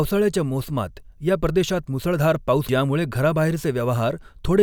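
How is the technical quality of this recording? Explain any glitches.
The recording has one glitch, at 2.69 s, right after "मुसळधार पाऊस": a brief glitch breaks into the speech. It comes from damaged data in a compressed stream. Part of the encoded audio was corrupted, so the decoder read garbage for that frame, lost its place in the bitstream and had to hunt for the next valid frame header before clean decoding resumed.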